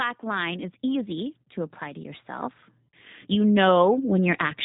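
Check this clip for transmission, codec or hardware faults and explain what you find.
Two faults are present: a low-rate speech codec across the whole clip, and three episodes of automatic gain rising.

The G.729 codec damage is plainly audible from start to finish. Nothing above 4 kHz survives, so the speech sounds narrow and muffled. It is intelligible but rough and slightly synthetic. The codec does not send the waveform. It sends a vocal tract model, a pitch estimate and a few pulses per frame, and the decoder rebuilds speech from those. The rough, buzzy texture points to a rate of about 8 kbit/s.

Automatic gain rising occurs three times: from 0.23 to 1.17 s by about 3 dB, from 1.78 to 2.61 s by about 4 dB, and from 3.29 to 4.15 s by about 4 dB. Each rise takes just under a second. The gain control judged the input too quiet and raised its gain step by step. Speech and background noise swell together, so the level creeps upward rather than jumping.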